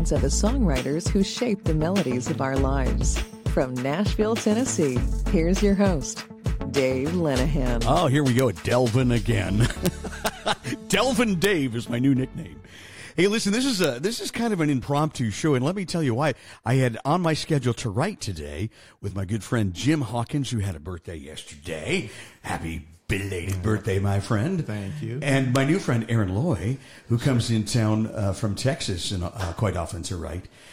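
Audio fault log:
8.39, 9.86, 10.26, 10.94, 11.44, 13.84 and 25.56 s, integer overflow: violent single cracks on loud peaks, where samples exceeding the integer limit by at most about 1 dB wrapped to the opposite extreme instead of being limited.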